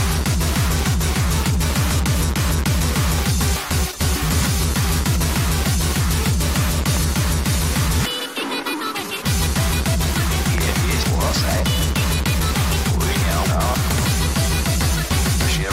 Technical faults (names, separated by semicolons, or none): loud pop